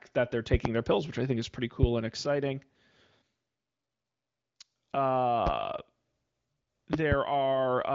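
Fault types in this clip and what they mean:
loud pop: Sharp pops stand well above the speech, which carries on beneath them: a double pop at 0.53 to 0.68 s, single pops at 1.83 s and 5.47 s, and another double at 6.93 to 7.15 s. Likely cause: sudden voltage pulses from switching or static.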